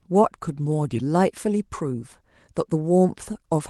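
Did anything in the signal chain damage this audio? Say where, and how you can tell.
No, nothing in the chain damaged this speech. It has gone through a WebRTC call path, and the top end rolls off at about 12 kHz, which fits Opus at around 24 kbps.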